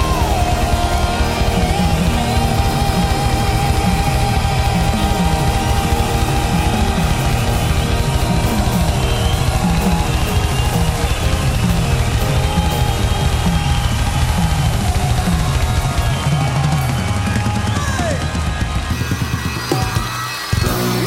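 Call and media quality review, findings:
Section at the wrong speed, 18.92 s to clip end at 21.07 s. Probable component: playback or edit stage clocking this segment against the wrong rate, likely a sample-rate mismatch. Audio runs 1.55x fast, pitch and tempo rising together, roughly seven semitones up. The sound turns high and hurried, with an abrupt jump at onset.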